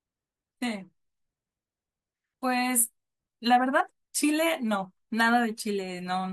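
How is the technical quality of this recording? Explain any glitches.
The recording has one glitch: damaged data in the compressed stream, at about 3.80 s in the speech. For less than 20 ms, the decoder hit corrupted bytes it could not read as valid frames, lost sync and jumped ahead to the next recognisable frame header. The result is a brief chirp or blip in the speech. On a spectrogram it appears as a thin vertical smear of broadband or oddly patterned energy. The waveform shows an abrupt discontinuity there.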